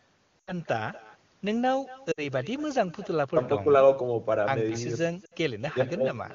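Throughout, an echo with no canceller trails the speech by about a fifth of a second, roughly 19 dB down: the far end's loudspeaker feeds its microphone. On a spectrogram, each syllable has a fainter, blurred duplicate shifted right, and the waveform shows a low smear between words.

Lost AMR speech frames cause brief dropouts to near silence at 0.42–0.53 s, 2.11–2.23 s and 5.25–5.35 s, where the decoder extrapolates then fades. Each gap fits three or four missing 20 ms frames. They appear as narrow energy notches with smeared harmonics, while the wideband band stays clean.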